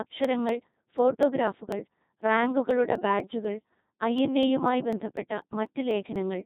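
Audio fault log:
Throughout: Codec 2 vocoder. The speech sounds robotic and buzzy, and nothing is heard above 3.8 kHz. The decoder rebuilds the voice from sine waves using only pitch, voicing, energy and envelope. The heavy damage fits a rate near 2.4 kbit/s.
0.25 to 6.41 s: periodic USB or driver dropouts. Ticks recur evenly, about every 0.25 s, around thirty in all. Each time a blocked bus or driver skips a few milliseconds of audio. The waveform jumps across the gap and clicks.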